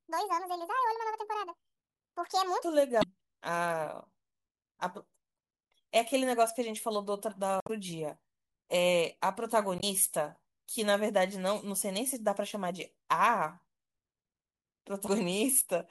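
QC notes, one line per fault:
0.00–2.64 s, section at the wrong speed: the opening speech plays 1.67 times faster than it was recorded, so it sounds hurried and noticeably high, lifted by roughly ten semitones. Speed and pitch shift together because the samples are simply played out at a faster rate, which likely comes from this stretch being fitted to the wrong clock during editing or playback. At 2.64 s the audio drops back to its natural pace and pitch.
2.99–3.04 s, 5.35–5.37 s, 7.60–7.70 s, 9.77–9.84 s, 15.05–15.09 s, damaged data in a compressed stream: five brief glitches, each lasting between about 24 and 96 ms, cut into the speech as a chirp, squawk, click or short hole. At these points the compressed frames hold wrong data, so the decoder misreads them, loses its place in the stream and has to lock onto the next valid frame header. That produces a brief disruption instead of the intended signal. 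The longest is at 7.60 s.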